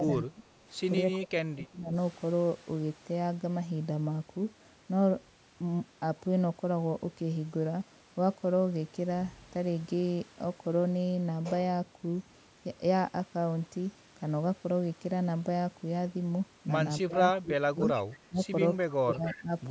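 The speech ducks by about 15 to 30 dB at 0.0–0.45 s, 1.19–1.95 s, 17.01–17.22 s, 17.42–17.79 s, 18.29–18.47 s and 18.85–19.53 s. This is likely speech suppressed in double talk, where the canceller turns the talker down while the other side speaks. It is a gap, not an added sound. Echo leak comes at 17.79–17.87 s and 19.28–19.41 s: short scraps of the voice repeat about 293 ms late, roughly 5 dB and then 15 dB below the speech. The likely cause is loudspeaker pickup that the canceller missed, which adds a delayed copy instead of removing speech.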